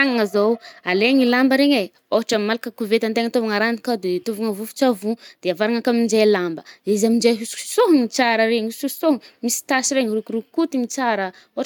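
No technical faults are audible.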